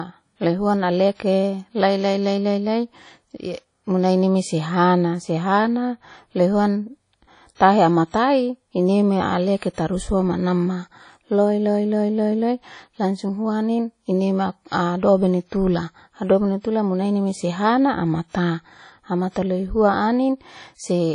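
Across the whole recording the speech has a ringing, washy quality, with a hiss that rises and falls along with the signal, and the damage is plainly audible. Nothing remains above 10.1 kHz, so the top end is cut off flat. This is likely WMA compression at a low bitrate, which fits something around 32 kbps. At that rate the encoder zeroes weak spectral detail and lets quantisation noise smear over long transform blocks.

From 7.55 to 7.60 s, just before "tahematai ineme", a short hiss of about 51 ms comes in ahead of the attack, and the onset itself sounds softened and smeared. This is pre-echo. The sharp attack fell late in a transform block, and the codec spread that block's quantisation noise evenly across its full length. Noise sized for the loud onset therefore also filled the quiet stretch before it.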